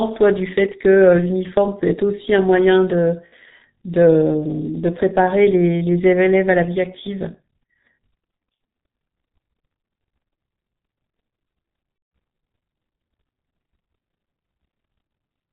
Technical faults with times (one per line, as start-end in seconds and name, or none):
0.00-15.52 G.723.1 codec
3.26-3.35 VoIP packet loss concealed by the speech codec
11.96-12.11 VoIP packet loss concealed by the speech codec